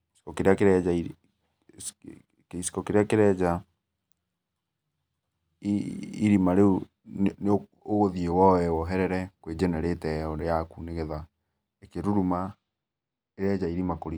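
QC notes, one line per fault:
12.52–14.18 s, channel delay (comb filtering): for the final stretch of the speech, one channel arrives a couple of samples late, roughly 0.05 ms, and the mono sum cancels content common to both channels. With so short a delay, the first notch falls at around 10 kHz, so the effect is concentrated in the top end. Sibilance and air lose crispness and take on a dull quality that holds steady to the end of the clip.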